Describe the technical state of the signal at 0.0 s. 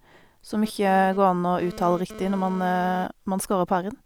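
At 0.0 s the speech signal is intact, with no audible technical fault at that moment.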